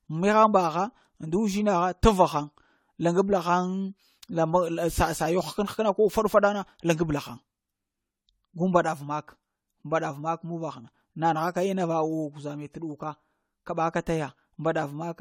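Generation loss throughout: hollow, swirly, smeared speech and blurred attacks, likely from about four AAC-LC passes near 64 kbit/s. Spectrogram: scattered holes below 20.1 kHz.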